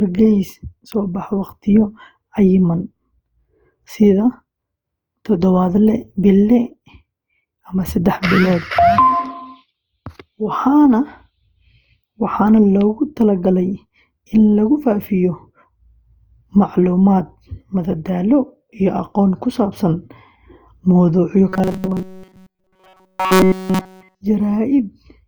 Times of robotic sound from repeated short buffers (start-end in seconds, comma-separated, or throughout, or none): 21.49-24.21